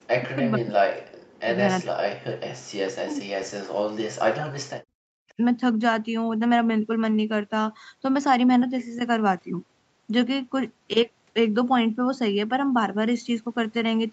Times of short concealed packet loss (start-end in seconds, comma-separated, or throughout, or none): none